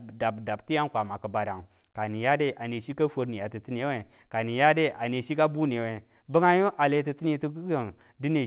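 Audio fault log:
No faults heard in this speech recording.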